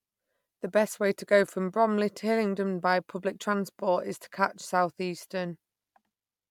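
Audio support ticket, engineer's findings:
Speech signal checked across its full duration with no technical faults found; level, continuity and timing hold steady throughout, and no component needs attention.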